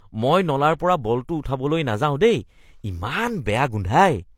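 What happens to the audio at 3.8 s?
At 3.8 s the speech still carries the artefacts of heavy compression, and nothing sounds above about 16.3 kHz. This runs through the whole clip. It is likely low-bitrate audio saved at a high bitrate: the high-bitrate re-encode cannot restore what the first codec removed.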